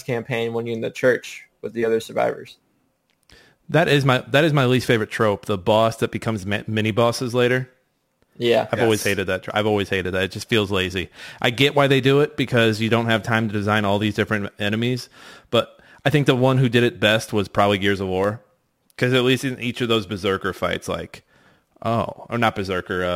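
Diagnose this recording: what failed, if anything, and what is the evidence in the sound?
Dropped samples at 18.24 s: a single sharp click, seen in the spectrum as a thin vertical line from low to high frequencies. Well under a millisecond of the speech is missing, far too little to remove any audible sound, so the waveform simply jumps from one value to a later one and that discontinuity is the click. The likely cause is at the driver or buffer stage, where a handful of samples were skipped during transfer.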